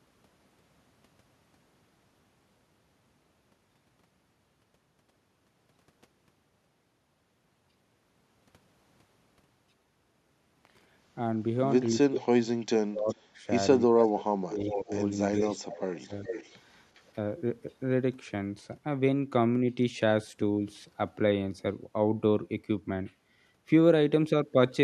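From 12.09 to 13.26 s the voice repeatedly dips, about 35 dB at worst, losing roughly 0.7 s in pieces. This is likely speech suppressed in double talk, the canceller muting the talker along with the far side. Unlike echo, sound is removed, not added. Within that span, at 12.16–12.2 and 13.08–13.15 s, faint echo leak appears: a copy delayed about 0.4 s, about 25 to 30 dB down. From 13.93 to 16.12 s suppression returns, about 30 dB deep, roughly 1 s total, while a stronger echo leak, about 15 dB down and delayed 0.41 s, runs from 14.04 to 17.02 s.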